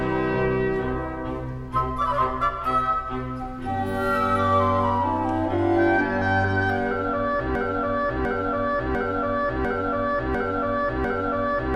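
A stall in the player, encoder or stream likely left it resending the last fragment it held, producing a broken-record loop from 7.55 s to the end: a 0.70 s piece repeats exactly six times back to back, and the audio meant for that stretch is lost.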